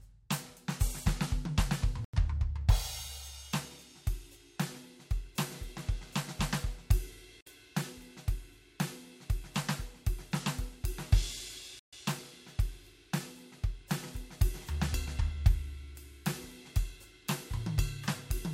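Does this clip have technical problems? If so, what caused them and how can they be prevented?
Yes. Radio interference likely delayed packets on the wireless link, draining the headphones' buffer, a Bluetooth stall. The music drops to silence at 2.05 s for 90 ms, at 7.41 s for 57 ms and at 11.79 s for 135 ms, then resumes where it left off. Keeping the phone close to the headphones with a clear line of sight, away from busy Wi-Fi and other 2.4 GHz devices, prevents these dropouts.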